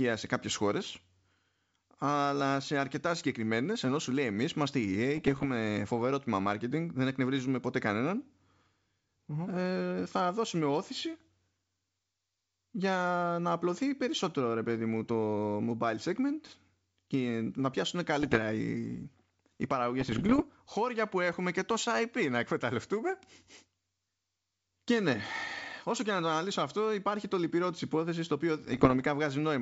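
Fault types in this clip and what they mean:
Bit errors on an ADPCM link: flipped bits, at somewhat under one percent, throw the G.722 decoder's step size and predictor off, so the speech breaks into pops and rough bursts with brief level jumps, each a few tenths of a second, near 5.2, 18.2, 20.0 and 28.7 s.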